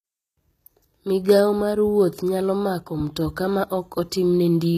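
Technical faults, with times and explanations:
Throughout, HE-AAC compression: the treble stays bright but sounds synthetic, with s sounds turning gritty and metallic, and nothing above 14.9 kHz. This is likely band replication, where upper bands are copied up from lower ones and shaped only coarsely, so harmonics don't align across the crossover. That fits a low bitrate around 20 kbps. A plain low-pass filter would dull the top instead, and ordinary low-bitrate coding would smear it with swirling noise rather than this copied sheen.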